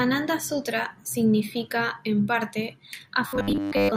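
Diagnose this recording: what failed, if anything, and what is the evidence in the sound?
From 3.28 s to the end at 3.97 s the speech collapses into a rigid, metallic buzz near 100 Hz: robotic sound from repeated short buffers. The likely cause is a starved driver buffer, with roughly 10 ms blocks replayed over most of that stretch while new audio was skipped.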